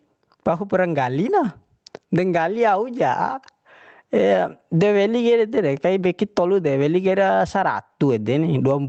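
Right through the speech there's gain pumping, with the level ducking hard under each loud syllable, a swing of around 20 dB. Likely the input gain is cranked too high, with a fast limiter clamping down constantly, so everything sounds squashed.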